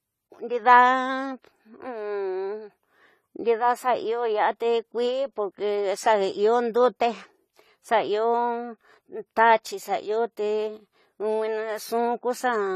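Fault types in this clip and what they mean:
AAC compression: throughout, likely from low-bitrate AAC-LC, around 32 kbps; the speech sounds dull and smeared, its high band cut and sibilants fizzy and warbling.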